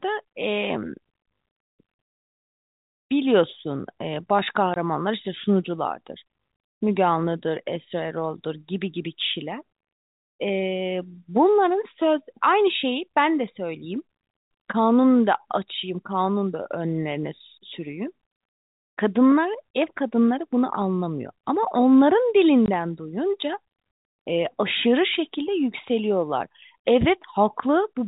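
At 4.74 to 4.76 s, and again at 22.66 to 22.68 s, the speech drops out for 20 ms each time. That's packet loss filled with silence: a single packet went missing and the receiver just played nothing in its place, which fits a 20 ms packet. The edges are abrupt. Around that, the G.711 telephone band still tops out at 4 kHz.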